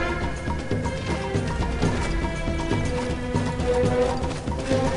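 No technical fault can be heard anywhere in this audio. Nothing in the recording calls for a correction or a cause to be traced.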